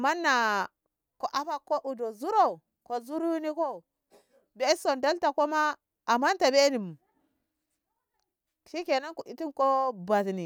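Speech recording with no technical faults to report.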